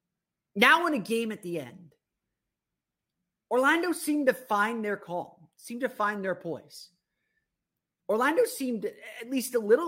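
No technical faults heard.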